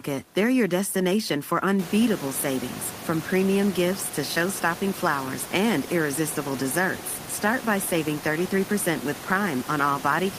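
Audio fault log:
No faults are heard in the audio. The room noise in the background rises by about 17 dB about two seconds in, then stays about 15 dB below the speech.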